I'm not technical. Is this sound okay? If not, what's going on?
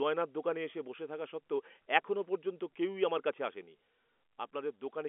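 Yes, this sounds fine: it's speech carried over an ordinary telephone line, so the narrow, slightly thin phone quality is just how calls normally sound, and nothing has gone wrong.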